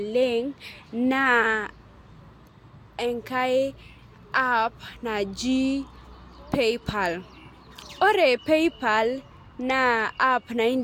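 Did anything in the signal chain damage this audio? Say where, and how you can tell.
No, nothing in the chain from capture through playback leaves an audible mark on this speech recording, so there is no stage to point to.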